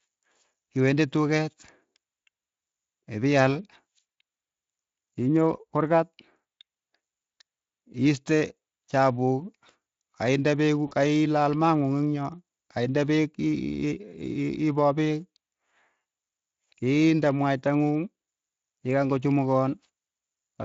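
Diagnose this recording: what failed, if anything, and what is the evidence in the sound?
VoIP packet loss in the network, concealed by the speech codec, at 4.11–4.15 s and 10.87–10.93 s: extrapolated buzz or coloured noise appears as smeared, decaying spectrogram energy.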